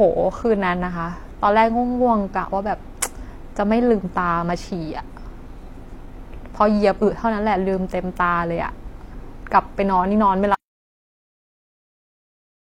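At 10.54 s the speech stops abruptly in mid-flow and the audio drops out to silence for the remaining 2.25 s, running to the end of the clip. The gap is silent, with no room tone, hiss or decay underneath, so it is not a natural pause. The likely cause is a loss of the input signal, such as a disconnected device, a failed link or an accidental mute, while recording carried on writing silence. Anything spoken during that stretch is lost.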